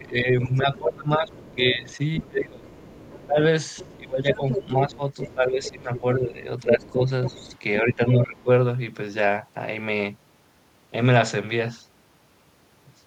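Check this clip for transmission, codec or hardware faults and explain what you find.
Two echo-cancellation faults are present, overlapping through most of the speech.

Speech suppressed in double talk, from 0.0 to 2.67 s and 3.26 to 8.48 s. The speech dips by up to roughly 20 dB. The likely cause is the echo canceller ducking the talker when both sides speak.

The other side's voice leaks through from 0.42 to 5.98 s and 6.62 to 7.59 s, roughly 15 dB below the speech. Residual loudspeaker echo likely survived cancellation.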